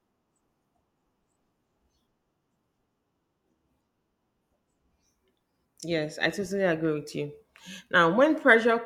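A speech recording with nothing technically wrong with it.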